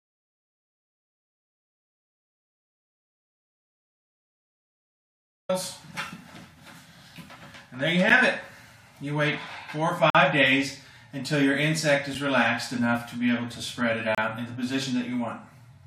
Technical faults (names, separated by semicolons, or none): audio dropout to silence; gap between stream segments